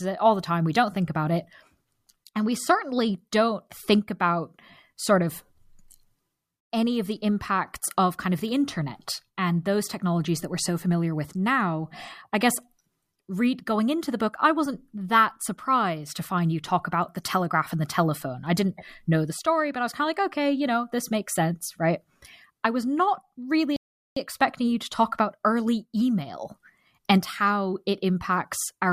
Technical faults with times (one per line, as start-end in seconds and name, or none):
23.76-24.16 rebuffering stall